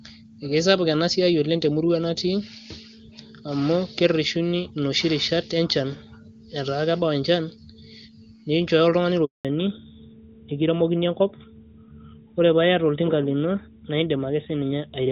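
A handover gap at 9.25 s cuts the speech to silence for 200 ms as the call switches networks and no frames arrive, losing whatever fell in that stretch. A fallback to narrowband follows at 9.45 s and lasts to the end: the sound loses everything above 4 kHz, turning duller and rougher, which fits a drop from HD Voice to a narrowband codec around 12.2 kbit/s.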